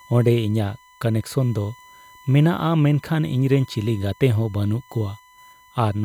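USB whine runs throughout the speech, a fixed 1 kHz tone about 30 dB down, paced by 1 ms bus frames and pitched far above 50 or 60 Hz mains hum.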